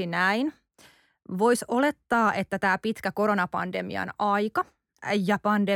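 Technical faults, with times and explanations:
Nothing to flag here: this speech recording has no technical faults anywhere in it.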